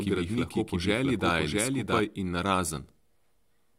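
From the start to 2.0 s, a second, equally loud copy trails about 0.7 s behind, then cuts off abruptly: a doubled audio track, likely from two out-of-step copies.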